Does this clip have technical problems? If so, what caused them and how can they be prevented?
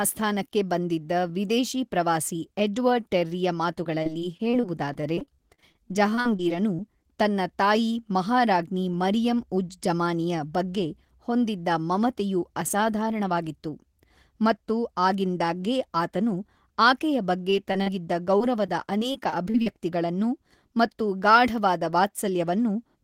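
Yes. Repeated packet loss (robotic sound) runs from 3.83 to 6.80 s, after "ವಿದೇಶಿ ಪ್ರವಾಸಿ ಎಡ್ವರ್ಡ್ ಟೆರ್ರಿಯ", and again from 18.38 to 19.68 s. Twenty-two and then seven dropouts, each up to about 38 ms, are patched by extending the previous sound, which makes the speech choppy and robotic. Short concealed packet loss occurs at 17.50–17.54, 17.72–17.76 and 17.82–17.88 s, after "ಮತ್ತು ಆಗಿಂದಾಗ್ಗೆ ಆತನು ಆಕೆಯ". These 20–40 ms holes are bridged with synthesized continuation and heard as brief smears. A more stable network path, a larger jitter buffer and codec forward error correction would prevent both.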